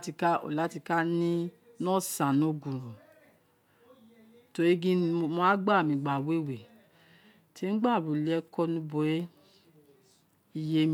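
A speech recording, with nothing technically wrong to point to. No dropouts, distortion or timing problems can be heard anywhere in it.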